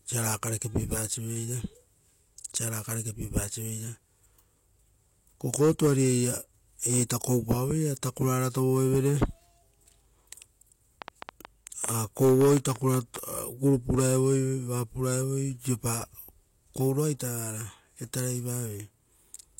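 From 11.02 to 13.17 s, a train of clicks ticks over the speech, about fifteen at 7 per second, irregularly spaced. Interference or a faulty connection is the likely cause.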